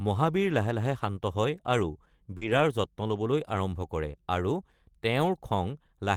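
Just after "লাহে শান্ত হয় আৰু", at 2.37 to 2.43 s, there is a short concealed packet loss. About 40 ms of audio never arrived in time, so the receiver extended the preceding sound to cover the hole and then crossfaded back. It is heard as a brief smear or wobble. On a spectrogram the harmonics run on unnaturally flat and then rejoin, and the waveform shows a repeated, slightly decaying cycle shape where real detail should be.

Overlapping it, from 2.41 to 2.59 s and ending before "যত্ন ল’বলৈ আৰম্ভ কৰে", comes a lost packet rebuilt from error correction. About 100 ms was replaced by low-bitrate copies carried in the following packets, a span that fits several consecutive 20 ms frames. There is no gap, but the sound turns rougher and grainier. The same fault returns at 5.21 to 5.27 s, about 40 ms long. On a spectrogram both stretches show coarser, noisier texture with smeared harmonic detail. 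The waveform stays continuous but looks less finely structured.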